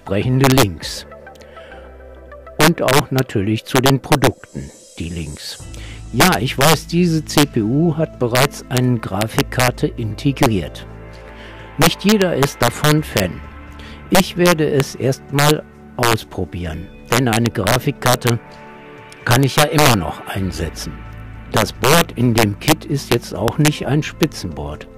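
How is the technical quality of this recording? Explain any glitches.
The technical quality is poor. Integer overflow breaks up the loud passages across the whole recording. The signal was driven about 9 dB past the integer ceiling. Nothing limited it there. Any peak over the top wraps around to the opposite extreme of the range. Less than one percent of samples cross that line. Each one still jumps across the full scale. You hear violent cracks on the loudest moments. They are far harsher and sharper than ordinary clipping.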